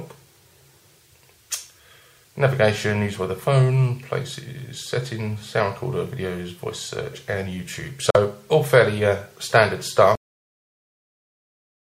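At 8.10 s the sound drops out for about 43 ms, then resumes further on, as if it kept playing. A Bluetooth dropout is the likely cause: late packets were discarded. At 10.15 s there is a cut-off end. The audio stops mid-sound with no decay, because the final buffers were never played.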